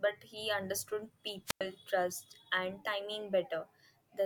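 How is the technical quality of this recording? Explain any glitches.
The recording has one glitch, a wireless microphone squelch dropout. From 1.46 to 1.61 s, between "he understood" and "trust and", the radio signal fades. Hiss rises briefly. Then the receiver's squelch mutes the output for about 101 ms, leaving a hole of near silence before speech returns.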